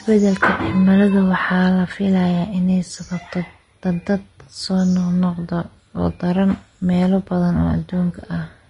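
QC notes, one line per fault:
Throughout, Vorbis compression: the speech is plainly hissy and grainy, with nothing above 10.6 kHz. The treble is quantised so coarsely that fine detail becomes noise, likely from a low-quality Vorbis encode that fits a bitrate around 31 kbps.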